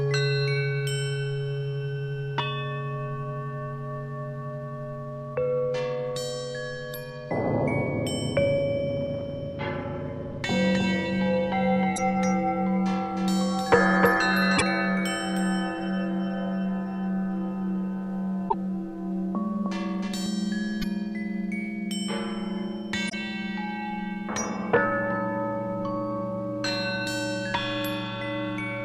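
From 10.74 s to 20.26 s there is a doubled audio track. A second full-band copy trails the original by around 300 ms, roughly 5 dB quieter. It carries no room colour, and it starts and stops abruptly. The likely cause is a second, slower capture path or an edit holding two copies out of step.

Damaged data in a compressed stream occurs at 11.93 to 11.98 s, 14.54 to 14.62 s, 18.46 to 18.54 s, 20.78 to 20.84 s and 23.06 to 23.14 s. Corrupted frames throw the decoder out of sync. Each event is a brief chirp, squawk, click or hole in the sound.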